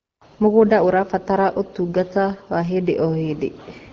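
Nothing stood out on listening to this speech clip, which comes through an AMR wideband (HD Voice) path at 12.65 kbit/s.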